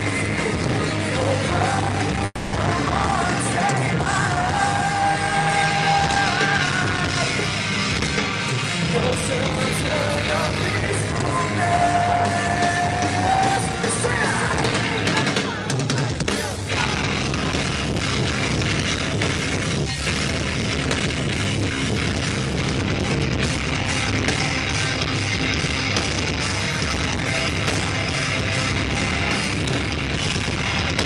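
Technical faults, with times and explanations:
2.25–2.54 s, call audio freeze: the sound stalls and the last moment is stretched into a fading buzz or hiss for about 270 ms, ending in roughly 30 ms of silence. When it resumes, it picks up exactly where it stopped, with nothing skipped. That sets it apart from a dropout or packet loss, where material vanishes. Here a gap is inserted instead, pushing everything after it about 270 ms later, likely because packets were delayed and the jitter buffer ran dry.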